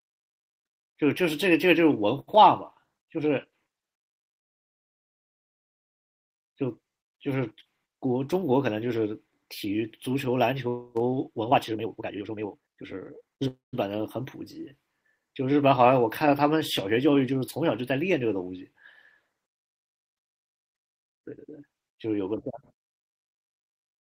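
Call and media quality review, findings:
Call audio freeze, 4.39–6.32 s: speech halts, then about 1.9 s of near silence before resuming where it stopped. Nothing lost; roughly 1.9 s of extra delay. Likely jitter buffer underrun after packets stalled in transit.

Call audio freeze, 13.48–13.75 s: brief 0.25 s stall, about 0.15 s of it silent, speech then continues intact. Same mechanism, likely packets held up until the buffer emptied, adding a quarter-second of delay.

Jitter buffer speed-up, 11.5–13.48 s: speech races at 179% speed, pitch unchanged, sounding rushed. Receiver drained a backlog by repeatedly cutting short pieces of one or a few pitch periods, about 1.5 s removed in total.

Jitter buffer speed-up, 21.04–23.97 s: milder hurry at 117% speed, pitch steady. Pitch-period cuts shortened the buffered audio by around half a second to pull latency back toward target.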